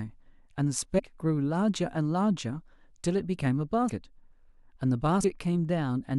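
Whole compressed frames of this speech clip were lost or rejected by the decoder, so compressed frames skipped: the audio jumps ahead by roughly 70 ms at 0.98 to 1.00 s and by about 100 ms at 3.88 to 3.90 s and at 5.23 s. The jumps fit a few 23.2 ms frames each.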